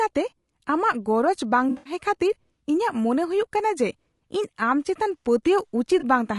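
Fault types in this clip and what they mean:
Low-delay AAC compression: likely a short-frame AAC-ELD codec at a low bitrate near 32 kbps, leaving the speech plainly rough and grainy throughout.
AAC frame loss with concealment: the decoder lost frames and patched them from earlier spectrum, smearing the sound noisily between 1.69 and 1.93 s and briefly at 6.0 s.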